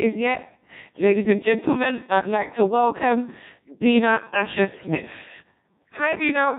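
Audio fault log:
throughout: Codec 2 vocoder, heavy damage. The speech is rebuilt from sine waves using only pitch, voicing, energy and a coarse spectral envelope, so the original waveform is gone. That leaves a robotic, buzzy voice, and the sound fits a very low rate of about 1.6 kbit/s.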